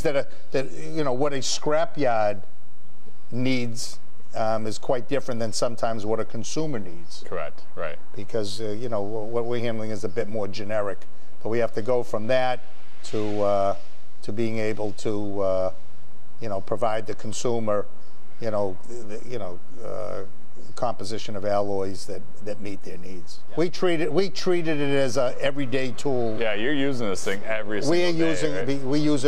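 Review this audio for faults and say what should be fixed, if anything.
A DC offset runs through the entire clip. The whole waveform sits shifted away from zero by a constant amount, about -19 dBFS. You cannot hear it as a tone. It shows up as steady energy at 0 Hz, the very bottom of the spectrum. It eats headroom, so peaks clip sooner on one side. It should be removed with a high-pass filter. Prevent it by using properly coupled, calibrated converters during recording.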